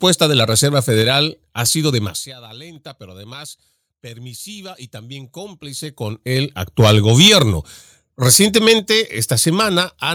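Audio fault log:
2.76 s, microphone volume stepped up: between "ha sido demasiada" and "pero además permisiva", voice and background jump together by 4 dB, as the call software raised the input volume in one step.
6.79–7.43 s, microphone overload: right after "también cómplice con el", the loudest syllables turn harsh and crackly, with a few percent of samples flattened; peaks likely about 5 dB over the converter's limit.
7.28 s, microphone volume stepped down: voice and background drop suddenly by 2 dB together, in the middle of the distorted stretch, likely the call software cutting input volume in response.
8.26–8.72 s, microphone overload: a second, briefer harsh crackle on peaks, with around one percent of samples cut flat, likely from peaks about 5 dB beyond the converter's ceiling.
8.79 s, microphone volume stepped down: just after that distortion, voice and background drop abruptly by 4 dB, likely the software lowering the device's input volume in one step.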